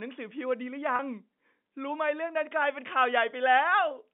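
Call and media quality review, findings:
Packet loss with pitch repetition, 0.96–0.99 s. About 30 ms dropped, which fits a single lost packet. The receiver's concealment repeats the last pitch period to fill the gap, so the speech holds briefly with a slight buzz before resuming. The G.711 telephone coding path carries it within a roughly 200 Hz–3.6 kHz line band.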